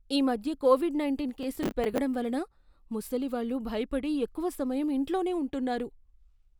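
A processor overload crackle runs from 1.29 to 1.98 s in this speech clip, after "ఈ మధ్య కోవిడ్" and before "వలన ముసలివాళ్ళు భయపడి ఎక్కువ": the processor misses its deadline on a run of short buffers, around ten milliseconds each, and each miss repeats a scrap of stale audio with hard edges, heard as a gritty, tearing crackle over the speech.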